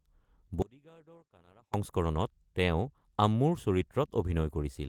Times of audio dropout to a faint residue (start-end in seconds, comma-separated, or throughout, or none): 0.62-1.74